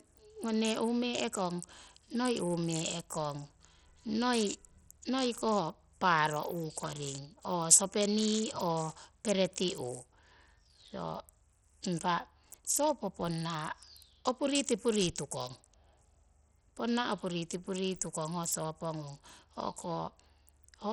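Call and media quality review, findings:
Gritty, flickering treble with aliasing on the speech, throughout. Likely Bluetooth SBC compression: upper sub-bands starved of bits and coarsely quantised, consistent with about 64 kbps.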